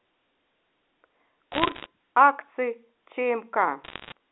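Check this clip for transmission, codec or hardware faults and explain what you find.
There are two bursts of bit errors on a digital phone line, from 1.52 to 1.86 s and again from 3.84 to 4.12 s, riding on a G.711 A-law line limited to roughly 250 Hz to 3.6 kHz. Each flipped bit wrecks a single sample, and hits on high-order bits kick out sharp ticks. So you get a spray of crackle over otherwise intact speech, a bit denser in the first burst, which points to around one or two percent of bits hit.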